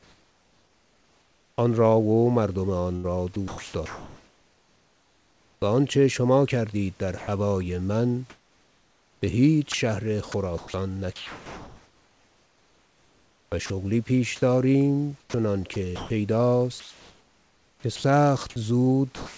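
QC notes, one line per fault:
0.00–1.58 s, comfort noise in place of the background: the real room noise, about 39 dB below the speech, gives way to a steady, featureless hiss about 6 dB quieter, likely from discontinuous transmission. On a spectrogram it is a smooth, uniform band with no texture. The waveform envelope is flat and lower.
2.96–5.62 s, 8.30–13.70 s, 15.20–16.10 s, sound chopped by the voice detector: the sender likely switched on and off repeatedly, so about 2.1 s, 3.5 s and 0.3 s of quiet speech and background become comfort noise. The waveform shows speech bursts broken by flat fill. The spectrogram shows patchy gaps with uniform noise.
7.18 s (100 ms), 17.96 s (80 ms), 19.16 s to end, sound dropped by the voice detector: quiet speech was likely taken for background and not sent. At the end, about 180 ms of sound is lost. Each drop shows as a sudden low, even-noise notch in the waveform and a gap in speech harmonics on the spectrogram.
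17.80–17.84 s, onset clipped by the voice detector: the detector was likely slow to retrigger, so the first 40 ms of a word is comfort noise and the speech starts abruptly. The waveform jumps from flat fill to full level. On the spectrogram, harmonics appear at once with no soft build-up, capped at 8 kHz like the rest of the call path.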